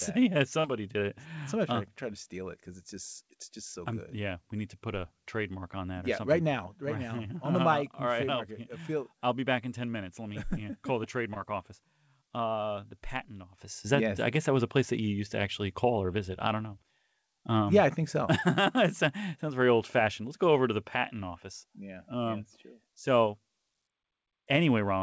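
At 0.60 to 0.66 s, just before "did it", the sound briefly smears, and at 11.34 to 11.38 s, right after "yeah call the", a shorter wobble appears. Both are short concealed packet loss: roughly 40 ms and then 20 ms of audio arrived too late, so the receiver extended the preceding sound to fill the gap before blending back. The audio's ceiling at 8 kHz fits a wideband call codec such as G.722.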